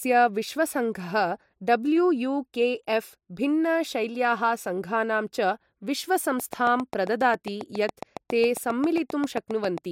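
From 6.40 s to 9.79 s, a train of clicks ticks regularly at 7.4 per second, loud over the speech, likely from electrical interference or a faulty connection.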